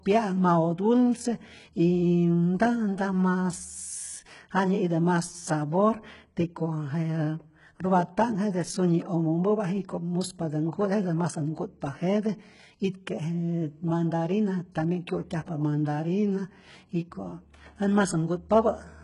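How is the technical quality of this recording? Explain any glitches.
The quality is poor. The speech carries heavy codec damage from start to finish. Throughout, the sound points to likely HE-AAC compression at a bitrate near 12 kbps. Treble is rebuilt from copied lower bands and cut off above 11.1 kHz, leaving s sounds gritty, metallic or lispy.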